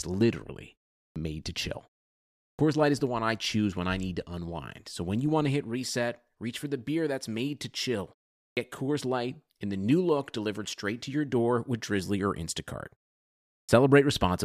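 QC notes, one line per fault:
1.12, 2.55, 8.53 and 13.65 s, clipped start after a pause: after each silence of about 0.4 to 0.8 s, the first 37 to 39 ms of speech is missing. The output path sleeps during the gap and must wake before playing, so each onset begins abruptly, without its opening sound.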